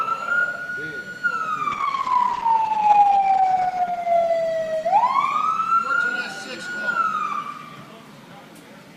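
Call bitrate drop, 1.74 s to 6.69 s: the bandwidth estimate fell and the encoder coded far more coarsely, which fits a fall from 48 kbps to 11 kbps. The audio turns rough and muffled, worst for about 1.6 s, then recovers.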